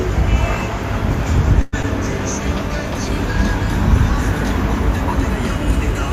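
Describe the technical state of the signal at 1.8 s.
A call audio freeze runs from 1.61 to 1.74 s. The last sound stretches into a fading buzz or hiss for about 111 ms, likely from delayed packets draining the jitter buffer, then resumes without loss. Short concealed packet loss follows at 1.82–1.85 s. About 20 ms never arrived, and the brief extrapolated fill blends back as a smear or wobble.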